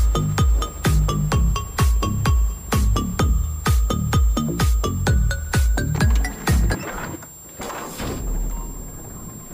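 A switching power supply in the signal chain is running in an audible burst mode, or beating against another supply, for the whole clip. That leaks a switching supply whistle into the audio: a thin, high tone sitting between about 7.4 and 7.5 kHz, wandering within that narrow band as the supply's load shifts. It rides roughly 20 dB below the wanted sound.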